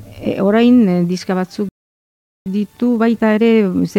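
A playback stall cuts the sound off at 1.69 s and leaves silence until 2.46 s, a gap of about 0.77 s. The player most likely ran short of data or had its output thread held up, so nothing reached the output.

Time-compressed catch-up follows from 2.46 s to the end. The player trims its backlog by removing small slices and cross-fading the joins, so the audio runs about 1.1 times faster at unchanged pitch, sounding hurried.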